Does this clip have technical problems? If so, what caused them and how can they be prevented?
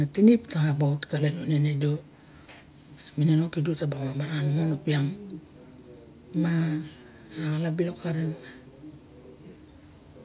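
No, this clip has no technical problems, so there is nothing to trace to a cause or to prevent.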